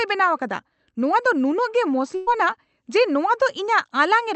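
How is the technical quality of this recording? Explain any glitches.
One glitch stands out in this speech, which comes through a call codec whose high end stops near 8 kHz.

From 2.15 to 2.29 s, a burst of packet loss drops about 120 ms; the receiver extends and fades the last sound instead of falling silent, unlike a plain dropout.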